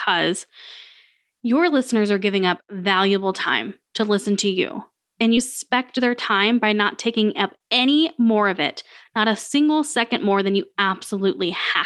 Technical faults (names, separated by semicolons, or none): skip ahead; jitter buffer speed-up